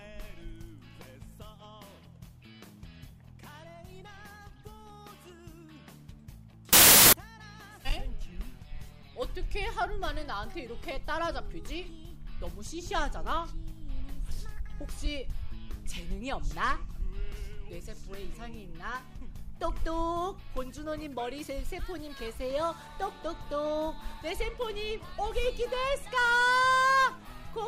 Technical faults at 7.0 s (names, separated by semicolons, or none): wrong sample width